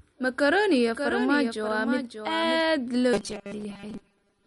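Throughout the speech, MP3 compression is plainly audible: nothing survives above about 11.1 kHz, and weak frequency lines flicker in and out, leaving a watery swirl on sibilants. This likely comes from a low bitrate, around 48 kbps. It differs from a simple low-pass filter because of that swirling.

From 0.89 s to 2.61 s a doubled audio track appears. A second full-band copy, about 5 dB quieter, follows roughly half a second behind, probably from a duplicated capture path. Unlike an echo, it has no decay or room colour, and it starts and stops abruptly.

From 3.13 s to 4.47 s there is robotic sound from repeated short buffers. Most of the real audio is skipped while the last fragment loops, likely a 5 ms buffer. That imposes a rigid 200 Hz metallic buzz that still loosely tracks the speech, unlike dropouts, which leave silent gaps.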